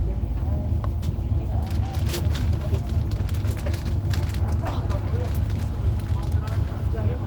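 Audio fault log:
No faults detected.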